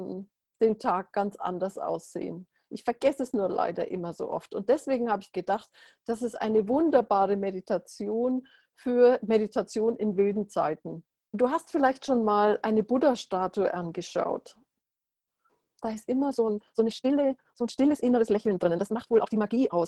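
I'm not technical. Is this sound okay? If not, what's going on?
No. From 16.26 s to the end, the sound suddenly runs 1.72 times as fast, rushed, yet its pitch stays put. That's a time-stretched section, likely software squeezing the audio to fit a length by dropping tiny pieces. A plain speed-up would also sound higher.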